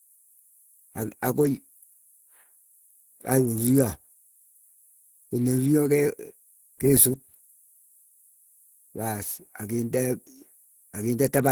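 A speech clip with Opus compression damage running the whole way through: the voice sounds hoarse and grainy, with a rough, noise-filled top end rather than hollow swirls. That's likely a low-rate Opus encode, and the texture fits hybrid mode at roughly 16 kbps.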